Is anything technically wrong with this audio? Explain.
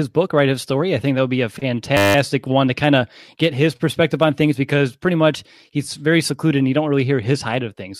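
Yes. From 1.97 to 2.15 s there is a system hang loop: the system froze while the sound hardware kept replaying one 10 ms buffer, 18 times, giving a steady 100 Hz buzz. Unlike a dropout, which leaves silence, this buzz repeats one piece of audio exactly.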